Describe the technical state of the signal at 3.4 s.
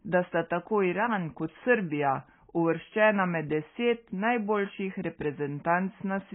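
At 3.4 s the speech sits inside a fault that runs through the whole clip: nothing survives above 3.4 kHz, and the remaining band sounds smeared and watery, with a warbling fizz on sibilants. This is likely AAC compression, with the heavy damage pointing to AAC-LC at around 16 kbps. A plain low-pass filter or telephone band-limit would leave the surviving band clean, but here the quantiser starves the spectrum frame by frame and leaves swirling, unstable texture.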